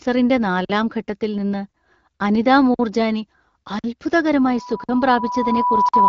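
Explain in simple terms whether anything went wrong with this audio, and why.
Gaps between chunks cut short holes into the speech at 0.65, 2.74, 3.79, 4.84 and 5.89 seconds. The first comes just before "ഘട്ടത്തിൽ നിന്ന്". Each lasts about 48 ms, and they arrive on a one-second rhythm. The audio likely travelled in one-second pieces and was rejoined with silence at each seam.

A loudspeaker feedback squeal starts at 4.42 seconds and runs to the end. A tone near 986 Hz swells over about a second and a half. A microphone was picking up its own loudspeaker.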